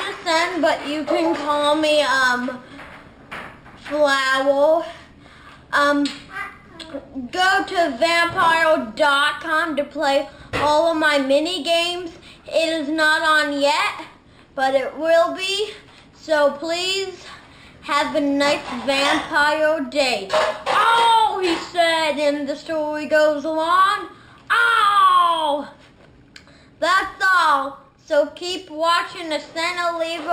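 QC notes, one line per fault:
Throughout: imaging from linear upsampling. Straight-line interpolation, consistent with a 12 kHz source raised to 44.1 kHz, filters weakly, dulling the band's top and leaving mirror images at 6 to 12 kHz, roughly 25 dB down, heard as metallic shimmer on high content.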